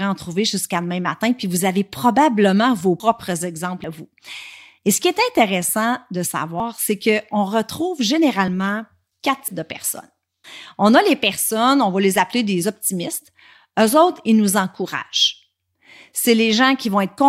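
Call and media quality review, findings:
Abrupt forward jump in the speech, no gap of silence, at 3.00, 3.84, 6.60, 8.48 and 9.48 s. Roughly a tenth of a second missing at 3.00, 6.60 and 9.48 s, less at 3.84 and 8.48 s. Likely dropped buffer (overrun) in the capture path: input not read before hardware overwrote it, lost chunk removed, neighbouring audio spliced end to end.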